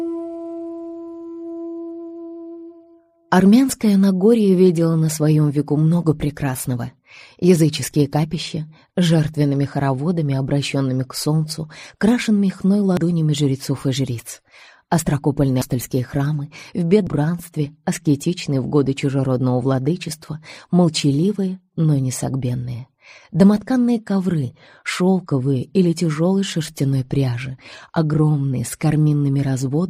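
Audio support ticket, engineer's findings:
Abrupt jumps forward at 12.97 s, 15.62 s and 17.07 s. Roughly 100 ms, then about 300 ms twice, skipped without silence. Likely dropped buffer (overrun) in capture.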